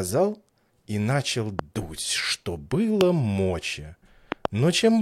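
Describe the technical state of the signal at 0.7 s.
At 0.7 s the signal is intact, with no dropout, distortion or other fault to be heard at that moment.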